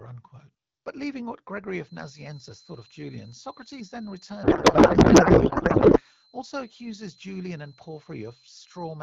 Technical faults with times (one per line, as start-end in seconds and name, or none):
1.81-9.02 feedback whistle
4.43-6.03 codec payload misread